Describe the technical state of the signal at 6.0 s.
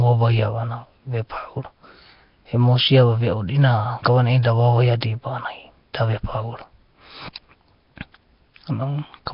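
At 6.0 s, as everywhere in this speech clip, you get a rough, hissy halo and a smeared, underwater quality, with nothing above 5.3 kHz. That's likely Nellymoser compression: coarse fixed bits per block leave weak bands noise-filled, which fits a bitrate around 22 kbps.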